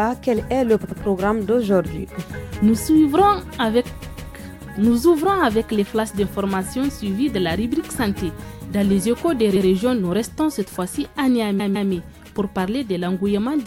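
Repeated frames at 0.83 s, 4.01 s, 9.55 s and 11.59 s: a short block of compressed audio, 78, 157, 105 and 157 ms long, plays again once or twice, giving a stutter. Together the repeats add about 0.9 s.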